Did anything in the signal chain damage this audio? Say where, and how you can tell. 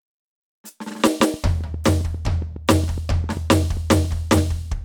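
Yes. There's a train of clicks over the music from 1.07 to 4.06 s. That's around twenty near-identical pops at an even 7.4 per second, peaking about 5 dB above the music. The steady rate points to likely interference pulses getting into the analogue wiring.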